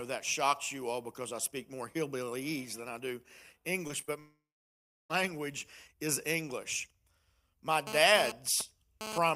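Brief smears and wobbles at 3.87–3.91 s, 4.01–4.05 s and 4.05–4.10 s are short concealed packet loss: about 20 ms of audio each time arrived too late and was patched by extending the preceding sound.

From 4.20 to 5.11 s the sound trails off into a fading buzz and then about 0.66 s of silence. This is likely a long network dropout, with roughly 0.9 s never delivered and the audio resuming past the gap.

From 7.87 to 9.18 s a hard, raspy 217 Hz buzz rich in harmonics sits about 7 dB below the signal and comes and goes. This is GSM phone buzz from a nearby handset's bursty data transmission being rectified by the audio circuitry.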